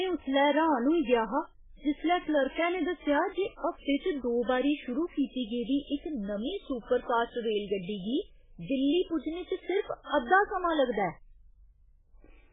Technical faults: MP3 compression

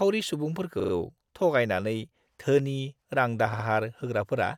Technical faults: repeated frames

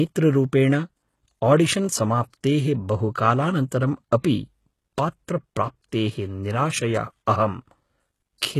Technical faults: HE-AAC compression

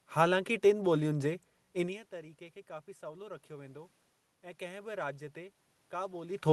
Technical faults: automatic gain rising

